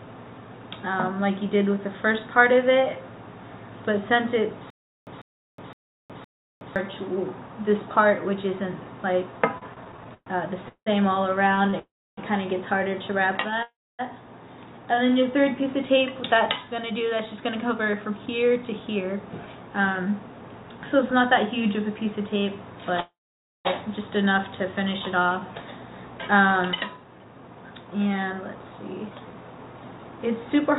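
From 4.70 to 6.76 s there's a stutter with silent gaps: a 147 ms burst plays, then about 367 ms of dead digital silence, and the same burst comes back on a steady cycle of roughly 514 ms, four times over. That's likely a player or stream stalling and replaying its last fragment at each retry before running dry. Whatever should have played in those two seconds is gone.

Repeated stalls (stutter) run from 9.58 to 13.63 s. The jitter buffer keeps running empty because packets arrive late or slower than playback, so the receiver stretches the last bit of sound to cover 15 short holes, the longest 180 ms. About half a second gets filled in this way, around 12% of that stretch. Nothing is actually lost, but the sound drags and hiccups.

Inside that run, at 11.79 to 12.19 s, there's a call audio freeze. The last sound is held as a fading buzz or hiss for about 0.38 s, with roughly 300 ms of it dropping to silence, likely because packets were held up in transit. 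Another freeze hits at 13.63 to 14.01 s, about 0.36 s long with around 270 ms silent. The biggest is at 23.00 to 23.67 s, 0.65 s held and about 520 ms of silence. In each case the sound resumes right where it left off, so it's a gap inserted into the audio rather than anything cut out.

Then there's jitter buffer speed-up at 16.35 to 21.11 s, running at 108%, and again at 26.88 to 30.70 s at 110%. The buffer had piled up extra audio, so the receiver trimmed tiny pitch-period slices over and over, roughly 0.4 s each time. The pitch stays put while everything sounds a bit rushed. All of this sits on a call path whose band stops at 4 kHz, which fits G.711 mu-law at 64 kbps.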